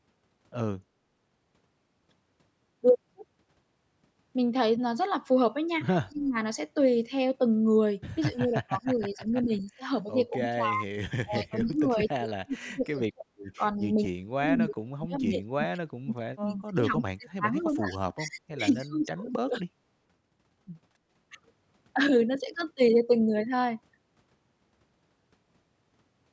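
Speech recording, band-limited to 8 kHz by call microphone processing, where the talker repeatedly dips by roughly 20 to 40 dB at 6.08–6.36, 8.3–10.86, 11.24–13.25 and 13.77–19.66 s, likely speech suppressed in double talk as the echo canceller attenuated both sides. Faint delayed copies of the voice, around 30 to 35 dB below the speech and trailing by 229 ms, appear at 12.84–12.89 and 13.78–13.87 s, likely an echo leak from a loudspeaker path the canceller failed to fully remove. Between 20.93 and 21.11 s the room sound drops by about 12 dB and then recovers, background gated by the echo canceller while the loudspeaker was active.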